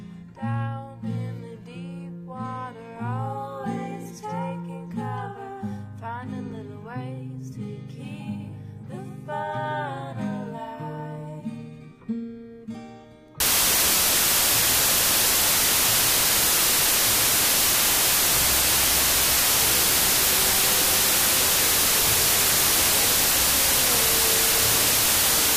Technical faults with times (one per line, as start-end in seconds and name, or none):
13.40-25.57 wrong sample width